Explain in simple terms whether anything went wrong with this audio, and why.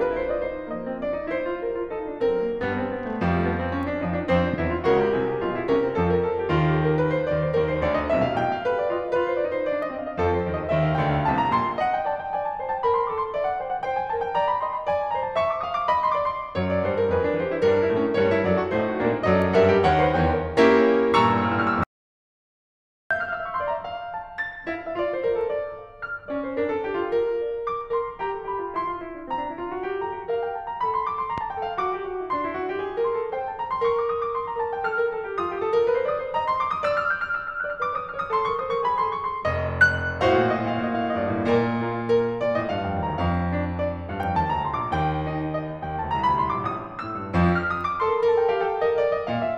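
Two kinds of fault show up in this music. A loud pop hits at 4.54–4.56 s and again at 31.38–31.40 s, each a single sharp click well above the music, likely from a switch or static spike. An audio dropout to silence runs from 21.84 to 23.11 s. The music vanishes for about 1.3 seconds into total silence, likely because the input briefly disconnected.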